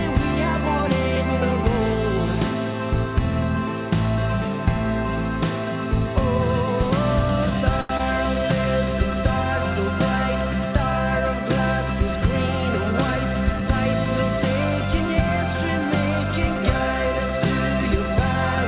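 The audio comes through a call path whose band stops at 4 kHz, which fits narrowband G.711 coding. At 7.81 s a packet arrived late and the jitter buffer ran dry, a short stall from a late packet: the receiver held the last sound for 83 ms until the data turned up, so the sound hangs unnaturally long with a faint buzz or dip, though nothing is lost. Just after, from 7.97 to 8.01 s, 20 ms of audio never reached the decoder, a short concealed packet loss: the receiver extended the previous sound across the gap and blended back, leaving a brief smear or wobble. From 13.18 to 14.06 s the buffer had built up excess delay, so the receiver performed a jitter buffer speed-up, cutting short pitch-length slices, around 70 ms in total, which makes the audio run about 6 % fast at unchanged pitch and sound slightly hurried.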